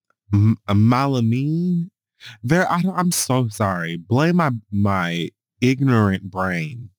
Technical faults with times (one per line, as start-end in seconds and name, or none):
0.00-6.98 crude rate conversion